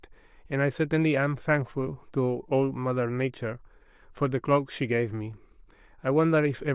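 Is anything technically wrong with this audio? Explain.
No, nothing technically wrong stands out in this speech recording; it all comes across just as it should.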